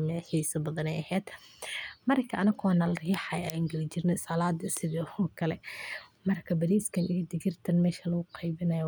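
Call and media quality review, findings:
No faults found in this call and media quality review.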